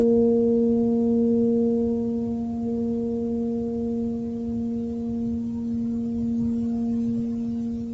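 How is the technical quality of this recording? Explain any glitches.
No glitches turn up anywhere in this bit of music; it just sounds like it came over a call, with the top end stopping at 8 kHz the way a call codec and the microphone processing before it would leave it.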